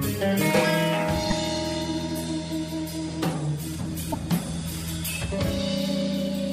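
A brief glitch breaks through the sound from 1.29 to 1.33 s, and a second, longer one follows from 4.09 to 4.15 s. Both come from damaged data in the compressed stream: bytes at those points were lost, zeroed or overwritten, so the decoder misread or rejected the affected frames, lost sync and had to hunt for the next valid frame header before clean playback resumed.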